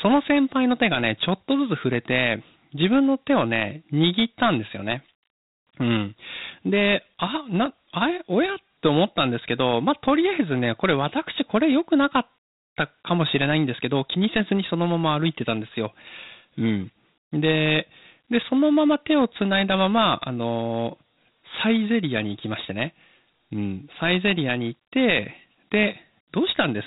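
From start to finish the speech carries the grit of Dialogic VOX ADPCM, the old telephony voice-file format. Every sample is squeezed into a 4-bit step from its neighbour, and that coarse step tracking leaves a rough, hissy grain riding along with the talking. The damage is plainly audible. Nothing reaches above about 3.8 kHz, so the top end is gone, which fits 8 kHz sampling at roughly 32 kbps.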